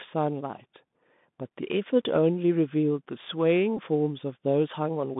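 From start to finish the speech carries the Bluetooth CVSD headset codec, confined to roughly 150 Hz to 3.6 kHz, which fits a 64 kbit/s one-bit delta stream. Its adaptive step can't keep up with loud high content, so sibilants turn scratchy over a grainy hiss, unlike the smoother muffling of ordinary band-limiting.

At 3.77 s a Bluetooth headset packet repeat occurs. The headset link lost about 15 ms of audio, which points to around four packets, and the chip decoded the last good packet's bits again. The result is a brief buzz near 267 Hz rather than a silent dropout.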